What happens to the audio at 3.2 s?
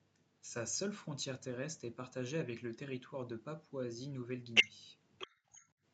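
Nothing goes wrong at 3.2 s: the speech passes through intact, with only the normal call-path band limit, no content above about 8 kHz, audible there.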